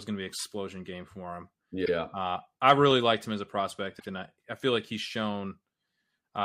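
At 0.38 s, 1.84 s and 3.99 s the speech stutters from repeated frames. A block of compressed audio was decoded more than once, so the same slice plays again. At 0.38 s a 26.1 ms block, fitting a single frame, sounds three times. The later repeats replay 52.2 ms and 78.4 ms blocks once each. Unlike a dropout, nothing is missing. The sound doubles back, and each repeat adds its length to the clip.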